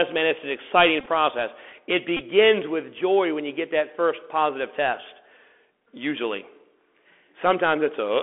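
From the start, the whole thing sits behind a Bluetooth CVSD headset codec. The band is squeezed to about 300 Hz to 3.4 kHz, and the one-bit up/down coding, which fits a 64 kbps CVSD link, is plainly audible. There's a grainy hiss riding under the speech, s sounds come out scratchy, and louder bright bits smear because the adaptive step can't keep up with them.

Then at 1.00 to 1.07 s, right after "man it's an exciting", you get the Bluetooth headset packet repeated fault. Packets dropped between headset and phone, and the chip just replayed the last good one each time. About 41 ms went missing, scattered over 60 ms, which points to around eleven lost packets. The longest stretch is around 20 ms, where the repeats line up into a short buzz near 267 Hz. It happens again at 2.17 to 2.21 s, just before "with joy when you", with about 26 ms lost across 37.5 ms and the same brief buzzy stutter.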